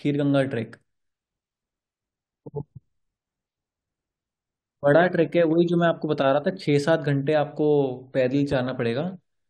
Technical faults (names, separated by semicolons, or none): loud pop